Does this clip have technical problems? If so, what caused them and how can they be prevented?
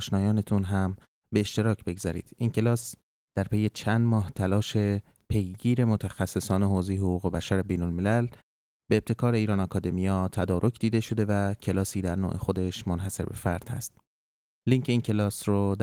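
No, no technical faults are audible anywhere in this speech recording, so nothing needs preventing.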